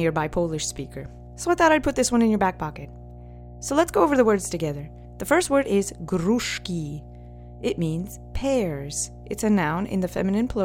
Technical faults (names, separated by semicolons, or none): mains hum